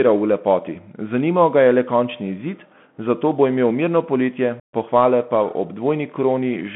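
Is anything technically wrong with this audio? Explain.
Yes. A Bluetooth CVSD headset codec runs throughout. One-bit adaptive delta modulation, consistent with a 64 kbps link, confines speech to 150 Hz–3.4 kHz, leaving scratchy sibilants and a granular hiss.

Unconcealed Bluetooth headset packet loss occurs at 4.60–4.73 s, between "bo imel mirno poletje" and "pohvale pa ob". About 135 ms, likely around twenty packets, drops to abrupt silence, and the speech then resumes briefly quieter.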